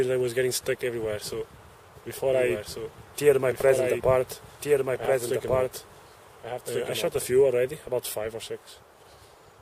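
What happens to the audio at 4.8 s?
At 4.8 s you're in the middle of a doubled audio track, which runs from 2.33 to 7.23 s. A second, full-band copy of the same audio sits about a second and a half behind the original and roughly 5 dB quieter, so everything gets a dry, detached repeat with no room tail. It likely comes from a slower second capture path, and it cuts in and out abruptly at both ends.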